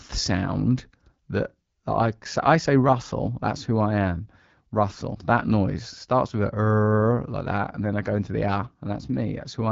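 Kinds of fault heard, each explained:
No faults can be heard in this speech clip. It has passed through the AMR wideband (HD Voice) codec at 12.65 kbit/s, which leaves only light coding damage and nothing above about 7.6 kHz.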